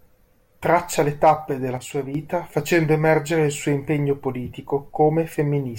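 Right after "le tappe della", at about 1.77 s, the speech drops by about 6 dB and comes back at 2.15 s, just before "facendo emergere il suo". That sudden dip is likely one channel drops out, leaving the mono sum at half level for that stretch.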